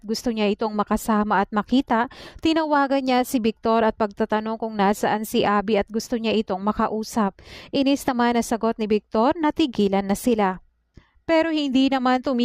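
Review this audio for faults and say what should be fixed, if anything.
Nothing here needs fixing: the signal's level and continuity stay steady throughout, with no audible technical problem anywhere.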